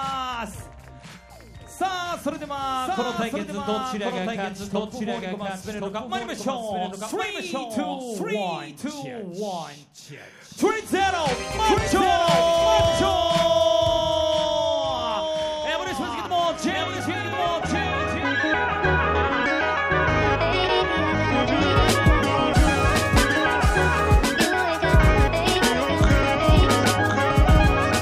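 Throughout the audio there is a doubled audio track: a second full-band copy of the same sound trails the original by around one second, sitting roughly 5 dB lower. The copy carries no decay or added room colour, so it reads as a clean repeat rather than an echo. The likely cause is the signal being captured a second time through a slower path, or an edit leaving two out-of-step copies in the mix.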